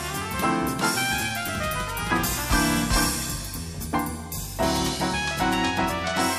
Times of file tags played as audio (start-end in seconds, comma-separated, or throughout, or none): none